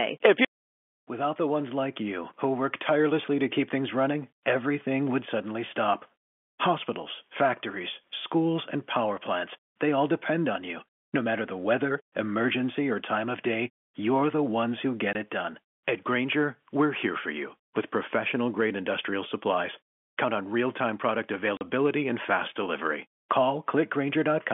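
Packet loss filled with silence cuts into this telephone-band speech recording at 15.13 to 15.15 s and again at 21.57 to 21.61 s. At those moments the receiver had no audio to play, so it inserted dead silence. The first gap lasts 20 ms and the second 40 ms, which fits packets of 10 ms each. The sound stops and restarts abruptly at each hole.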